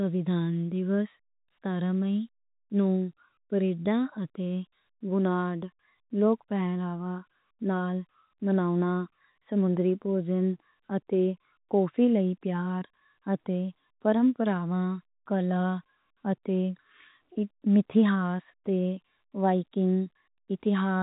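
No technical fault can be heard in this speech, which carries G.711 telephone coding working as intended, with nothing above about 3.8 kHz and at most a faint trace of the format's own level-following quantisation noise.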